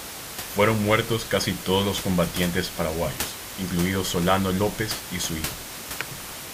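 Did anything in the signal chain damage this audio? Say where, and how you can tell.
No, nothing in the chain has damaged this speech; the only thing under it is the room's own background noise, sitting about 10 dB below the speech, and that was captured by the microphone rather than added by any stage.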